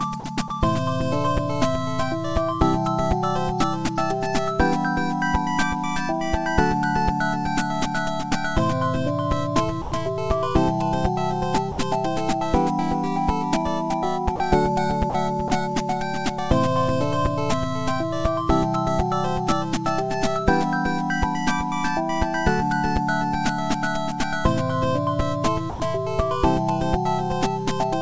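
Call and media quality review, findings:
Sound dropped by the voice detector, eight short gaps: 0.20–0.24, 0.48–0.50, 9.82–9.92, 11.72–11.78, 14.36–14.40, 15.10–15.14, 15.48–15.50, 25.70–25.80 s. Likely sender VAD misclassifying sound as background and halting transmission; receiver fills with comfort noise. Effect: 20–100 ms dropouts where the sound gives way to flat steady noise, then resumes. Band audibly ends around 8 kHz, consistent with a wideband call codec such as G.722.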